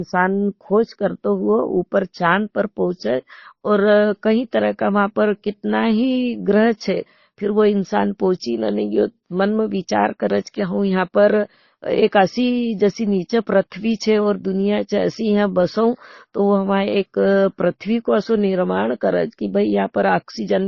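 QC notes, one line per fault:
throughout: transcoding between lossy codecs. Dull speech cut off above 6.8 kHz, with two kinds of artefact stacked. Likely a low-rate MP3 re-encoded to Opus.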